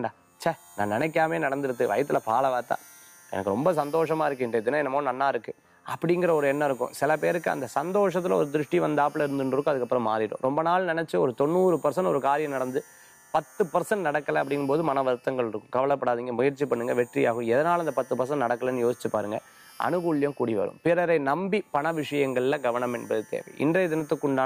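No audible faults turn up anywhere in the clip.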